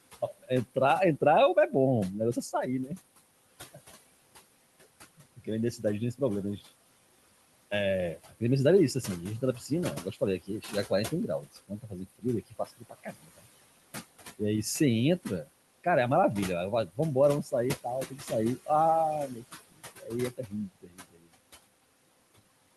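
Noise suppressor artifacts run through the whole recording. The suppressor pulls the room noise, which sits about 15 dB below the speech, down by about 19 dB whenever it judges a band to be steady noise, so the background sinks in the pauses and swells back under each phrase. On a spectrogram the noise floor looks patchy and pumping. Isolated time-frequency blobs flicker on and off.

Speech cut by the noise suppressor appears at 0.21–1.73 s, 2.34–2.91 s, 5.18–6.62 s, 7.71–13.47 s, 16.87–18.69 s and 19.28–21.34 s. In each stretch the suppressor mistook quiet speech energy for noise and turned it down along with the background. The deepest drops are about 19, 9, 14, 21, 13 and 22 dB. Most stretches lose only brief fragments, but across 7.71–13.47 s the losses add up to around a second and a half. The affected speech sounds swallowed there. The waveform shows envelopes collapsing abruptly, and the spectrogram shows speech energy missing in the same spots.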